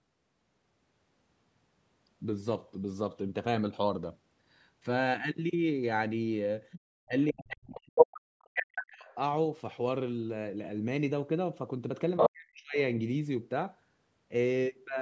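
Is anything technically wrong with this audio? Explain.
Yes, there are two related problems, both from echo cancellation struggling on a call.

First, the other side's voice leaking through. At 6.71 to 6.8 s a faint second voice, about 15 dB under the talker, slips in. It returns at 7.97 to 8.19 s, roughly 10 dB louder than the talker, then at 8.54 to 8.83 s at about the same level, and at 12.17 to 12.29 s about 5 dB above. The likely cause is a loudspeaker echo the canceller didn't fully strip from the mic.

Second, speech suppressed in double talk. At 7.07 to 7.14 s the talker briefly dips by around 20 dB. From 7.3 to 9.16 s, about two seconds, it's pushed down by as much as 40 dB, overlapping those louder leaks. At 12.29 to 12.78 s, right after the last leak, there's another half-second drop of around 40 dB. This is likely the canceller failing to tell the talker from the echo while both were active, so it turned everything down. 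The band stopping at 8 kHz is just the call processing and isn't part of this.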